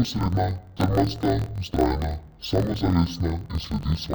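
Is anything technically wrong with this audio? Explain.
Yes. Interleaved audio read as planar, throughout the speech: alternating left-right samples in each roughly 23 ms block, which fits a 1024-sample block, were split into halves, each replayed at half speed. The voice sounds an octave low, doubled and chopped at about 43 Hz.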